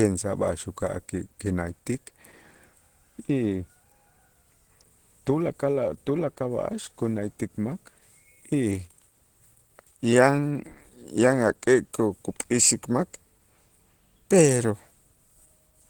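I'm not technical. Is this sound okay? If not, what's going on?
No. Throughout the clip, the speech has a rough, grainy and hoarse quality, which points to Opus compression, likely applied at a low data rate. To save space, the encoder runs in a mixed mode built for speech and rebuilds parts of the sound from approximations rather than keeping every detail. The treble is still present, but the sound is muffled, and the roughness is plainly audible from start to finish.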